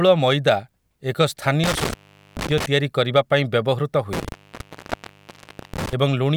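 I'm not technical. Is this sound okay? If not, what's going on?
No. This speech has an intermittent contact, like a loose cable, twice: around 1.64 to 2.66 s, with the sound gone for about 0.43 s, and around 4.13 to 5.93 s, gone for about 1.4 s. Crackles at each cutout's edges and faint hiss in the gap set it apart from a plain digital dropout.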